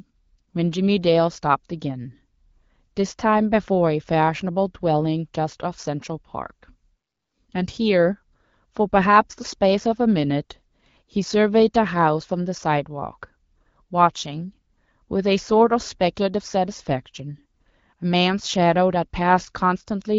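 Nothing stood out on listening to this speech, which comes across as an AMR wideband (HD Voice) call at 12.65 kbit/s.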